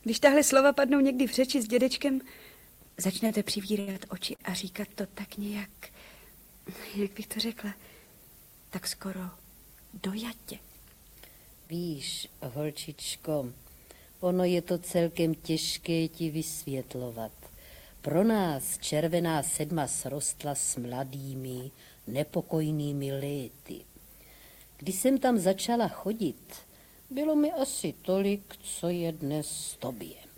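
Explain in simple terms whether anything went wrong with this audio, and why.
Between 3.27 and 4.41 s the sound hiccups four times. This is repeated stalls (stutter): the pieces of audio arrived late, so the player kept running out and stretched the last bit of sound to bridge each wait, the longest about 70 ms. Nothing is actually lost, which is what sets it apart from packet loss. The audio just drags and stumbles, with roughly 176 ms of filler spread across that stretch.

At 11.67 to 11.71 s there is a single brief smear. This is short concealed packet loss: about 20 ms of audio never arrived, and the player papered over the hole by continuing the sound just before it, then blending back in. Unlike the stutter, something really is gone here, and it happens as one quick blip rather than a series of catches.

From 27.85 to 28.92 s the audio rushes forward at about 107% of normal speed. 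This is a jitter buffer speed-up: too much audio had piled up waiting, so the player trimmed out tiny slices, about a tenth of a second in total, to catch up. The pitch stays the same, which is how it differs from simply playing a recording too fast. It sounds hurried, not higher.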